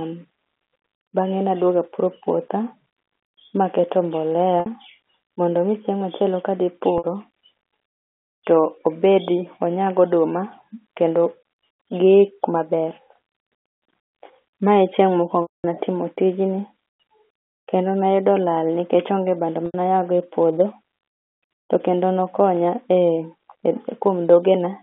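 Packet loss with pitch repetition occurs four times in this speech, carried over a G.711 telephone line limited to about 250 Hz to 3.5 kHz. The gaps are at 4.60 to 4.66 s just after "maketo mbolea", 6.98 to 7.04 s, 15.42 to 15.64 s just after "e chieng'", and 19.66 to 19.74 s. The concealment loops the last pitch period and then fades it. The 60 and 80 ms losses come across as a brief, buzzy held tone. The 220 ms loss fades into silence, and the speech returns with a short cross-fade. These durations fit 20 ms packets.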